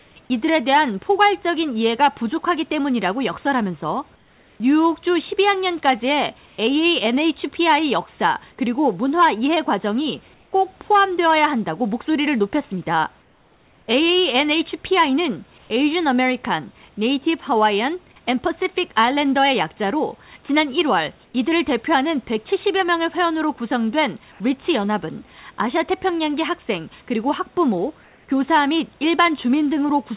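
Comfort noise in place of the background appears at 0.00–0.16, 4.16–6.58, 10.34–10.52, 13.22–15.70, 21.26–21.34, 24.32–24.40 and 28.04–28.28 s. In these pauses the real room noise gives way to a flat, featureless hiss, likely from discontinuous transmission. The hiss is mostly about 1–4 dB quieter, once about 2 dB louder. It sits within the call path's band, with nothing above 4 kHz.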